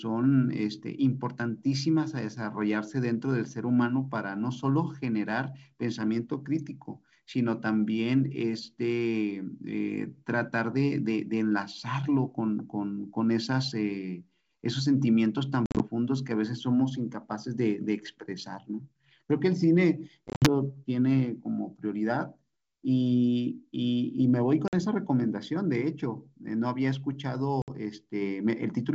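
Packet loss on an ADPCM call hits at 15.66, 20.28, 24.68 and 27.62 s. Silent gaps totalling 50 to 110 ms per event desync the decoder's predictor, so the speech comes back slightly distorted.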